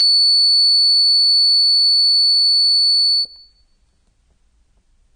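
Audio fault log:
throughout AAC compression: music is plainly dull and smeared, nothing above 9 kHz, likely AAC-LC quantising the spectrum at a bitrate fitting about 32 kbps.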